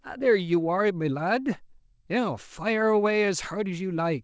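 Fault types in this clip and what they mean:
No faults in this clip.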